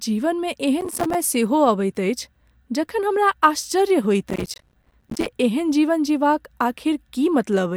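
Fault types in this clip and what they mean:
processor overload crackle: The processor keeps missing its deadlines for short buffers, which fits buffers of about 5 ms. Each miss drops in a sliver of silence. A gritty crackle tears through the speech from 0.81 to 1.15 s, and again from 4.29 to 5.26 s, between "जखन हमरा आश्चर्य" and "एहन जीवन जीबाक".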